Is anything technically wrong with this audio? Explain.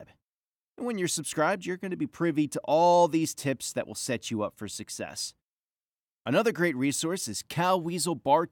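No, nothing technically wrong turns up anywhere in this speech recording.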